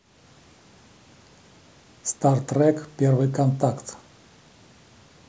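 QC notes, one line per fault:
No technical faults can be heard anywhere in the speech signal.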